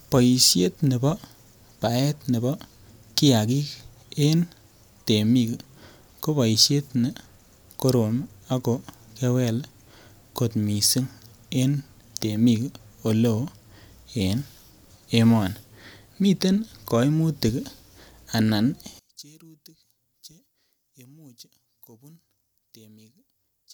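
One channel inverted from 18.99 s to the end of this speech recording: the two stereo sides, likely with one channel's polarity reversed, cancel when summed to mono, so the centred voice drops by about 28 dB and survives only as a faint residue of the channel difference.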